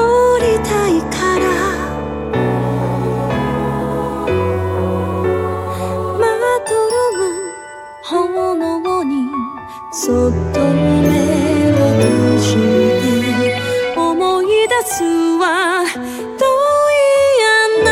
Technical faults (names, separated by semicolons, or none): none